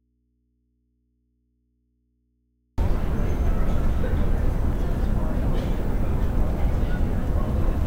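Everyday sounds open in an audio dropout to a faint residue, already under way at the start and lasting until 2.78 s. Only mains hum remains, roughly 50 dB below the signal, likely from a live input with its source disconnected. The waveform is near-flat until a sudden onset, and the spectrogram shows thin hum lines before broadband energy appears.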